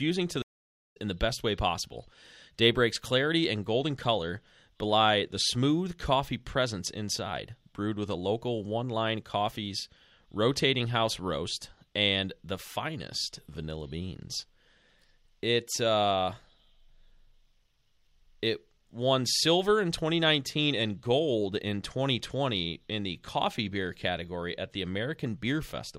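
At 0.42 s the speech cuts to silence for about 0.51 s, returning at 0.97 s with "in the best way". This is a stream reconnect: the connection dropped, the player went quiet, re-established the link and started a new decoder partway through the stream. Because playback picks up at the live position rather than where it stopped, roughly 0.7 s of speech is skipped, so the sentence resumes abruptly with material missing.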